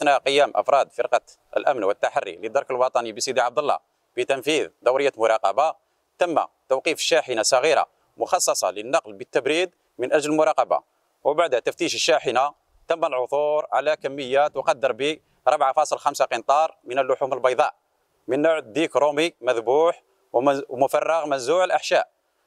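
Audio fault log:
No faults heard anywhere in this clip.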